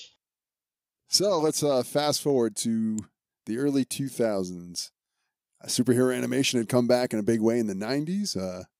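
At about 2.99 s, right after "let's uh fast forward" and before "the early", there's a sharp snap riding on top of the speech, peaking around -20 dBFS. That's an electrical switching spike, most likely a nearby switch or motor arcing and the audio line picking it up.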